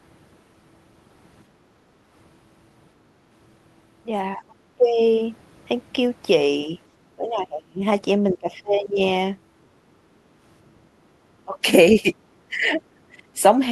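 Speech dips by about 20 to 25 dB at 1.78–1.83, 4.37–5.01, 7.16–7.83, 8.34–8.99, 11.45–12.07 and 12.48–13.39 s, likely speech suppressed in double talk. Unlike packet-loss dropouts, these are ducked stretches of speech.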